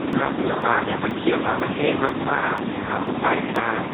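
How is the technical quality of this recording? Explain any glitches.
The technical quality is poor. The speech has been squeezed through a very low-rate codec, and it is also broken up by regular dropouts.

Speex codec: Throughout the clip, the Speex encoder has too few bits to describe the excitation, so it works almost like a vocoder. The sound fits a setting around 2 kbps. Speech comes out heavily damaged, hoarse, noisy and robotic. Nothing is present above 3.8 kHz, so the voice also sounds muffled and narrowband.

Periodic USB or driver dropouts: From 0.13 s to 3.56 s, something in the system stalls the USB bus or the audio driver at a fixed 0.49 s interval. Each stall skips about 10 ms of audio, and this happens roughly seven times. Because the lost samples are skipped rather than filled, the waveform jumps at each gap. The result is an evenly spaced series of ticks that sounds only while speech is present.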